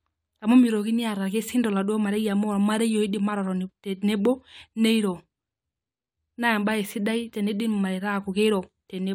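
No dropouts, clicks, distortion or other audible defects turn up anywhere in this recording.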